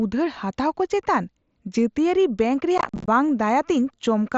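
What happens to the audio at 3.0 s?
Around 3.0 s the speech turns rough and chopped, with abrupt gaps. This is unconcealed Bluetooth headset packet loss, running from about 2.78 to 3.08 s. Short voice packets between headset and phone went missing, and silence took their place with no smoothing. Roughly 170 ms of audio vanishes across that 300 ms stretch, the longest single hole about 45 ms, which fits mSBC's 7.5 ms frames dropping in clusters.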